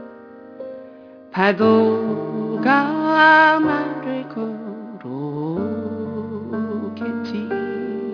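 Aliasing runs through the whole clip: the rate was lowered, seemingly from 48 kHz to 11 kHz, without a filter first, so content above 5.5 kHz folds back as wrong, unrelated pitches, roughly 25 dB down, giving sibilant and bright sounds a gritty, metallic edge.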